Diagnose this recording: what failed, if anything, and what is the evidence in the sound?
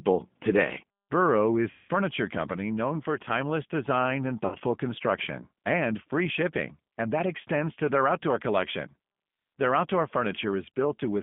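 The codec stage is at fault: the whole call runs through G.729, and its damage is plainly audible. At 8 kbit/s it rebuilds the speech from a vocal tract filter, a pitch predictor and a handful of pulses every 5 ms, so the voice comes out rough and slightly synthetic. The line is confined to roughly 150 Hz to 3.5 kHz, so there's no low-end body and no air above that. The codec is the lighter G.729A variant.

The network stage dropped packets in two places, and the speech codec's concealment filled the gaps. The first runs from 1.71 to 1.91 s, just before "company known for timeless", covering about 180 ms of missing audio. That fits roughly six packets. The second runs from 4.46 to 4.56 s, between "for timeless design and" and "construction and free shipping", covering about 60 ms. In both, the decoder keeps repeating its last pitch and filter at falling gain, so you hear the sound stretched into a buzzy tone or coloured noise that fades. 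Each frame builds on the previous one, so the audio takes a moment to recover once packets return.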